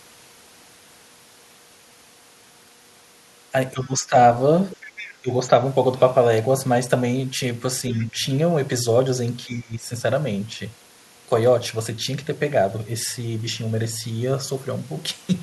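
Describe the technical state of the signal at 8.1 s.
At 8.1 s the speech sits in a shallow dip: from 7.91 to 8.19 s the level sags by roughly 5 dB, for around a fifth of a second in total, so the voice sounds briefly pulled back and less present. This is speech suppressed in double talk. With both ends talking at once, the echo canceller likely could not tell the local voice from the loudspeaker echo and attenuated everything it picked up, including the talker.

Just before that point, from 7.89 to 8.07 s, a faint second voice comes through, about 15 dB below the main speech, as a short scrap that ends shortly before 8.1 s. This is the other side's voice leaking through. The far end was playing on the talker's loudspeaker, and the echo canceller likely left a residue of it in the microphone signal. That same overlap of both sides is what triggered the suppression still under way at 8.1 s.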